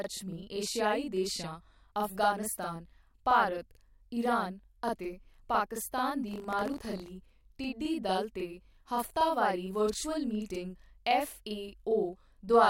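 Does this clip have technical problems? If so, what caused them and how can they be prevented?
Yes, there are two problems.

Throughout the speech there is channel delay (doubling). One channel arrives about 42.7 ms late, which fits a 2048-sample buffer. When the two channels are summed to mono, the late copy does not blend in. It sits at the same level as the original, so every sound is followed by a short slap, like a doubled take. Keeping both channels on the same buffer path and checking alignment before any mono fold-down prevents this.

From 6.29 to 7.11 s there is buffer tearing. A robotic buzz at 46.9 Hz rides on the speech there and stops when the signal stops. That rate fits a 1024-sample buffer. The writing program and the hardware reader have slipped, so they cross inside each period. A small slice of every buffer holds audio from about 40 ms earlier, with hard joins on both sides. 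Giving the writer enough headroom and resynchronising the read and write positions after any stall prevents this.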